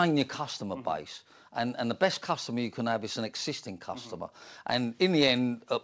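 Nothing goes wrong anywhere in this speech, which simply carries the character of a call line, with nothing heard above 8 kHz, which fits a G.722 codec running at 64 kbps.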